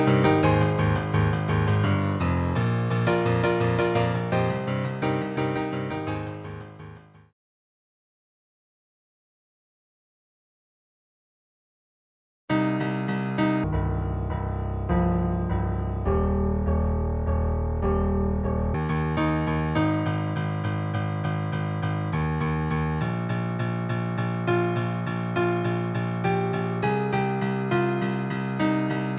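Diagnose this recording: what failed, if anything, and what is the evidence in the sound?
Wrong sample rate at playback, 13.64 to 18.74 s: the sound drops an octave and runs at half speed, fitting 16 kHz samples clocked out at 8 kHz unconverted.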